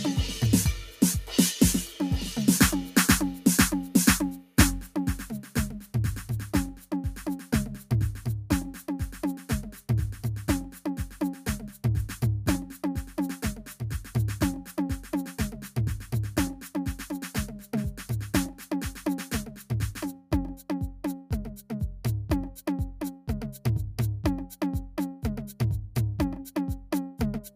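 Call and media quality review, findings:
Music pumps and thins throughout, held tones and tails swelling and sinking by around 10 dB while attacks pass intact. Noise suppressor applied to music: a speech-tuned suppressor left active, treating sustained tones and ambience as noise and pulling them down.

Sound cut by the noise suppressor at 0.82–3.46 s (under a second in total) and 4.4–21.7 s (about four seconds in total): sustained passages duck by up to about 10 dB, decays cut short. Same suppressor misclassifying steady content as noise.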